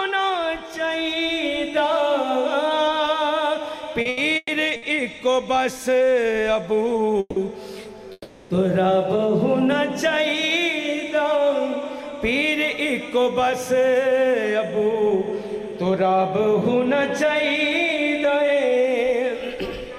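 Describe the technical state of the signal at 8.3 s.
At 8.3 s the signal is inside a call audio freeze from 8.12 to 8.52 s. Packets likely stalled and emptied the jitter buffer, so the last sound stretches into a fading buzz or hiss for about 380 ms, then about 20 ms of silence. Playback resumes where it stopped, about 380 ms late. On a spectrogram this shows as smeared, flat horizontal bands that fade; the waveform shows a repetitive, decaying envelope followed by a brief flat line.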